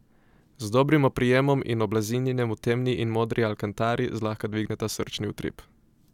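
No technical faults are audible.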